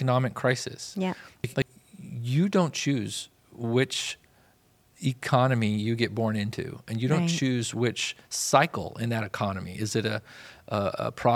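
At 1.44 to 1.62 s there's a brief jumbled patch: chunks out of order, a 60 ms chunk landing two slots late. It happens again at 10.38 to 10.5 s, one chunk late. Nothing is missing, just reordered, with hard joins at each seam.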